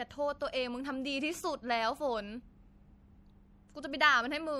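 A short speech recording with MP3 compression damage running the whole way through: the sound has that watery, swirly quality and smeared attacks, likely from an encoder starved of bits, which fits a low bitrate around 64 kbps, with weak frequency lines flickering on and off between frames.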